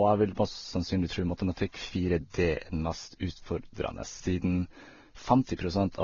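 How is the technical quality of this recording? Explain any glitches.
The technical quality is limited by one fault that runs through the whole speech clip. Nothing is heard above about 6.9 kHz, so the audio sounds dull. The different artefacts of the two codecs are heard together throughout. This is likely transcoding between lossy codecs, which fits low-bitrate Vorbis re-encoded to Opus. The second codec spent its bits on the first codec's artefacts and added its own. The 6.9 kHz cut-off stayed.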